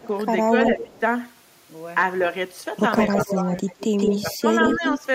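When both sides likely talked at once, the echo canceller could not tell this talker from loudspeaker echo and turned the speech down. That is speech suppressed in double talk: brief dips from 0.0 to 0.08 s (about 15 dB) and 0.49 to 0.92 s (about 10 dB), a milder one from 3.11 to 3.62 s (about 5 dB), and a deeper one from 4.22 to 5.05 s (about 15 dB). Overlapping these, a far-end echo canceller likely failed to remove its loudspeaker pickup, so echo leak returns a delayed copy of the speech. A faint one at 209 ms and about 30 dB down appears from 0.03 to 0.07 s. Then a 163 ms echo runs from 0.64 to 1.0 s at about 5 dB below the speech, and at roughly equal level from 2.97 to 4.22 s and 4.6 to 4.94 s.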